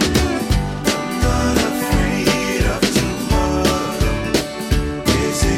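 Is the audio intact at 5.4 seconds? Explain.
Yes, the audio is intact at 5.4 seconds, with no dropout, click, distortion or other fault at that point.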